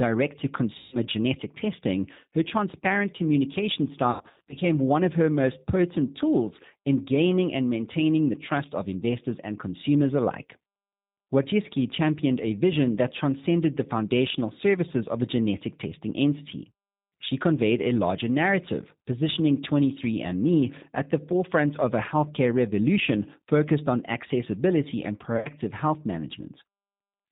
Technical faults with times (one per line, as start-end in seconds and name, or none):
0.00-27.31 G.729 codec
0.78-0.97 VoIP packet loss concealed by the speech codec
4.11-4.64 VoIP packet loss concealed by the speech codec
25.37-25.49 VoIP packet loss concealed by the speech codec